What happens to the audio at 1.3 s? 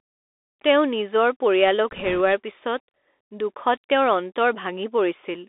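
Bluetooth CVSD headset codec, present throughout: one-bit adaptive delta coding confines the speech to 300 Hz to 3.6 kHz, fitting a 64 kbps link. Granular hiss and scratchy, slope-overloaded s sounds set it apart from simple band-limiting.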